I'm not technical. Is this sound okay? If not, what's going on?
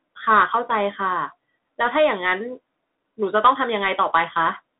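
No. The speech went through a Bluetooth CVSD headset codec, an old phone-call link that sends sound as a stream of up-or-down steps. Throughout, nothing above about 3.8 kHz survives, so it sounds muffled and boxy, s sounds turn scratchy, and grainy hiss sits underneath.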